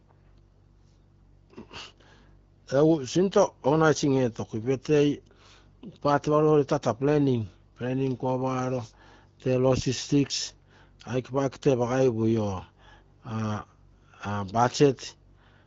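Nothing stood out on listening to this speech, which comes through the AMR wideband (HD Voice) codec at 12.65 kbit/s.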